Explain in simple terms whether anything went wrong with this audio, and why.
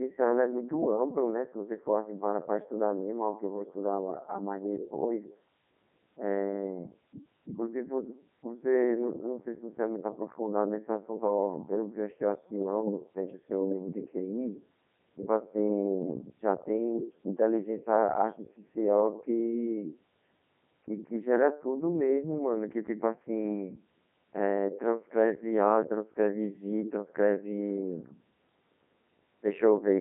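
The speech sounds robotic and buzzy from start to finish, as if a machine were rebuilding the talker, and it is thin and muffled with no crispness in sounds like s or f. This is the Codec 2 vocoder, a digital-radio system that sends only a rough description of the speech: pitch, loudness and overall tone colour. The receiver then rebuilds the speech from simple tones, so the original detail is lost and nothing above about 3.8 kHz survives.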